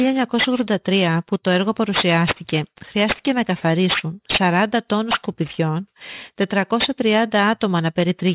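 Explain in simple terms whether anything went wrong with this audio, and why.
Aliasing runs throughout: the rate was lowered, likely to 8 kHz, without filtering, so sounds above 4 kHz fold back as gritty, metallic hiss on sibilants.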